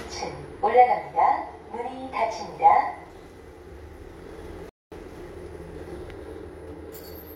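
At 4.69 s the sound cuts abruptly to silence and stays silent until 4.92 s, then picks up at exactly the point where it broke off, with nothing skipped or repeated. This is a rebuffering stall: playback consumed all the downloaded audio before the next portion arrived, so the player paused and waited rather than dropping material. All content is preserved, but the gap inserts about 224 ms of dead air into the timeline.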